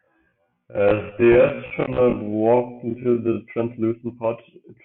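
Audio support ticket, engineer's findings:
Time-stretched section, 0.00–3.38 s: speech dragged to roughly half pace (0.516x), pitch unchanged. Likely cause: length-fitting stretch in processing, padding by repeating short slices. Pace snaps back to normal at 3.38 s. Distinct from sample-rate mismatch or slow playback, where pitch would drop along with tempo.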